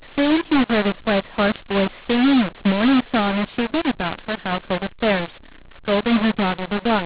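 From the first second to the end, the speech shows a mu-law and A-law mix-up: the telephone signal was encoded as A-law but decoded as mu-law. Because the two logarithmic curves assign levels differently, sample amplitudes come out scrambled, some too loud and some too weak, and the quietest values are pushed well above silence. The result is harsh, gritty distortion on every syllable and a noisy floor in the pauses. The 4 kHz band limit points to 8 kHz G.711 telephone coding.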